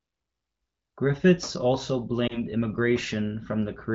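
At 2.27 s to 2.38 s there is a lost AMR speech frame. A single 20 ms frame failed its checksum, so the AMR-WB decoder filled the gap by repeating the previous pitch and vocal tract parameters at reduced gain. The result is a short dip or warble, and the speech takes a moment to regain its normal level and clarity. The wideband coding around it carries only light artefacts, consistent with a rate near 16 kbit/s.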